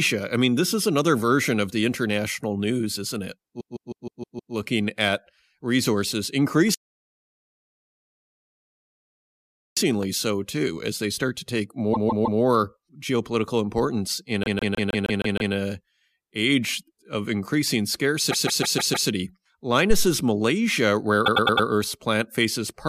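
A speech clip with a stuttering fault, a dropout and a low-frequency thump. The main fault is repeated frames. Short blocks of compressed audio were written more than once, so the decoder plays the same slice again. At 3.59 to 4.53 s, after "international news isn't it", a 156.7 ms block plays six extra times. It plays three extra times at 11.93 to 12.40 s. After "geopolitical importance in", at 14.43 to 15.53 s, it plays seven extra times. After "a age of increasing", at 18.30 to 19.08 s, it plays five extra times. At 21.25 to 21.67 s a 104.5 ms block plays four extra times. Each run is heard as a rhythmic stutter. From 6.74 to 9.77 s there is a playback stall. The sound stops mid-flow and goes silent. Then it resumes. The likely cause is the player running short of data or being blocked. At 19.90 s comes a phantom power thump. It is a deep thump that dies away in about 40 ms. It fits a supply being switched on a live input, with the voltage step passing through the coupling capacitors.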